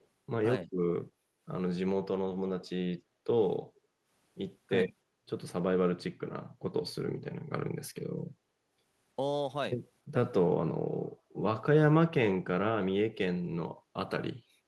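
Speech recording with faults concentrated in its first four seconds. A faint delayed copy of the talker surfaces from 0.00 to 0.06 s, lagging by 313 ms and very low at about 40 dB under the speech, and again from 2.60 to 2.69 s, lagging 337 ms at about 25 dB down. This is likely an echo leak from a loudspeaker the echo canceller failed to fully cancel. On a spectrogram these show as weak, smeared repeats of earlier harmonic patterns. From 0.66 to 0.70 s the speech briefly dips by roughly 10 dB over about 40 ms, consistent with speech suppressed in double talk. It would appear as a thin vertical notch in the waveform envelope. The background is gated by the echo canceller from 3.03 to 3.25 s, falling by about 10 dB, and from 3.85 to 4.04 s, falling by about 7 dB, each lasting around 200 ms. These appear as short, darker gaps in the noise floor across all frequencies.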